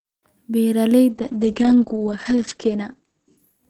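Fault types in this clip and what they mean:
Call bitrate drop: from about 1.1 s the encoder gets starved, roughly 64 down to 9 kbps, so speech turns coarse and muffled, capped near 8 kHz.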